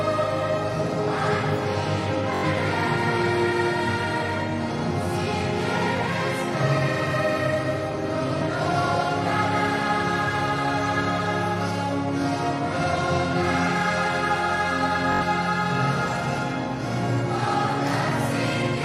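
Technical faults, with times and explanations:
2.35–2.44 s, Bluetooth stutter: Packets arrived late or were lost, so the receiver replayed its last buffer. About 85 ms gets filled this way, which fits four lost packets of about 21 ms each. The result is a brief machine-gun buzz.
5.97–6.01 s, Bluetooth stutter: A single slice of about 21 ms repeats, heard as a short hiccup.
8.38–8.41 s, Bluetooth stutter: The same single-slice repeat.
12.22–12.25 s, Bluetooth stutter: Again one repeated slice. The sound then jumps ahead.
15.12–15.22 s, Bluetooth stutter: Another buzz of about 85 ms. The sound resumes later, as if it had played on.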